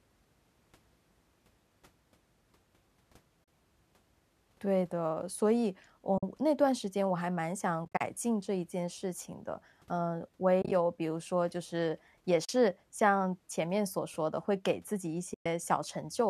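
The speech drops out six times through AAC frame loss with muting: at 3.44 s for 40 ms, 6.18 s for 50 ms, 7.85 to 8.01 s, 10.62 to 10.72 s, 12.45 s for 40 ms, and 15.34 to 15.46 s. Lost frames were zeroed, so the sound fades out and back in as soft-edged holes. The 7.85 s and 10.62 s gaps are broken into short bursts of about 30 to 40 ms. The longest hole, at 15.34 s, lasts 120 ms. The short holes fit frames of about 10 ms, likely from low-delay AAC, with light coding damage.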